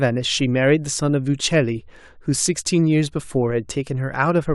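At 0.40 s a DC step occurs: the waveform's zero line abruptly shifts by about -32 dBFS, then drains away through a high-pass around 2 Hz. The sudden offset is heard as a single low thump beneath the speech, which carries on unchanged.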